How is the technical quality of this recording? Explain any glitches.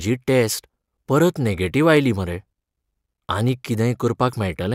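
The recording has two brief clicks, at 1.97 s and 3.48 s, each most likely from dropped samples. A fraction of a millisecond of the speech goes missing, so the waveform jumps to a later value and produces a single sharp tick, too short to remove any audible sound.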